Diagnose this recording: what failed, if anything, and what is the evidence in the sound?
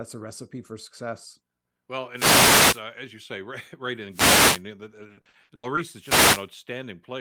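The radio link failed three times, with wireless microphone noise hits at 2.13–2.84 s, 4.10–4.63 s and 5.97–6.49 s. Each is a short swish or burst of static over the speech. The stage is the analogue RF path of an FM wireless microphone, before conversion: reflections cancel the carrier at the receiver, the receiver's own noise comes up as the signal drops, and in the deeper part of a fade it breaks into clicks and masks the voice.

From 4.83 to 5.79 s there is repeated packet loss with a robotic sound, a network-stage fault. Across that stretch seven gaps come in quick succession, the longest 80 ms. About 300 ms of audio, roughly a third of the span, was missing and was patched by extending the preceding sound, around 200 ms of it rebuilt that way. Because each patch is followed soon by another hole, the speech sounds choppy and mechanical, with pieces dropped out.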